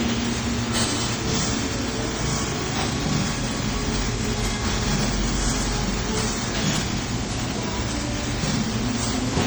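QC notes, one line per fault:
Throughout, generation loss: swirly, hollow, smeared sound with blurred attacks, likely from about ten MP3 re-encodes near 64 kbit/s; the spectrogram shows patchy holes and smeared transients.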